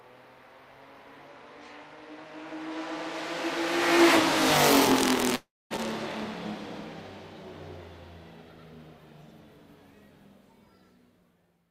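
From 5.35 s to 5.73 s the sound smears into a fading buzz, then 240 ms of silence; a long network dropout likely lost 360 ms.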